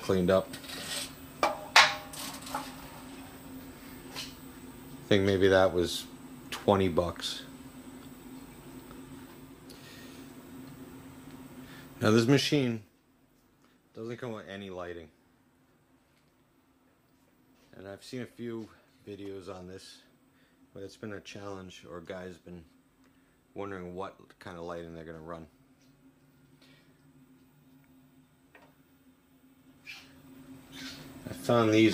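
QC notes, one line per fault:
12.35–13.00 s, zipper noise: a level drop of about 15 dB is applied in unsmoothed steps of about 2 dB, around fifteen per second. Each step adds a small click, so a ticking zip rides on the sound while the level falls.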